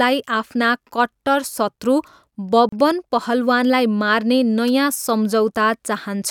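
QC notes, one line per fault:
2.69 to 2.72 s, gap at a join of encoded pieces: the speech stops dead for about 34 ms, then resumes exactly where it left off. The edges are smeared by the codec. This points to two separately encoded pieces joined without trimming. The encoder's start-up delay and the padding of the final frame both stayed in as silence. Nothing is missing from the speech. An unwanted pause was inserted at the seam.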